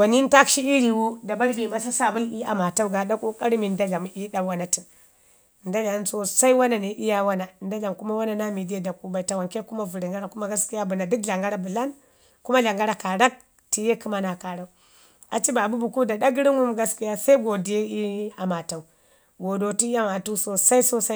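Speech recording with no technical faults present.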